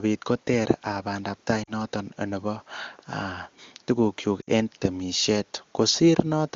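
Speech, with a drop toward near silence at 1.63 s lasting 40 ms, and a drop to near silence at 4.42 s lasting 60 ms. Both are lost AMR speech frames: the wideband decoder reused the last good frame's settings with falling gain.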